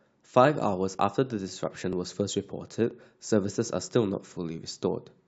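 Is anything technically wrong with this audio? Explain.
Yes, there are two small skips in this speech, at 1.93 s and 2.91 s, and they look like audio missing between chunks. Each one drops about 20 ms, and the two sides butt straight together with no gap of silence, so you hear a tiny jump rather than a pause. They sit roughly a second apart, which points to the recorder likely working in 1-second chunks and losing a sliver each time it hands off from one chunk to the next.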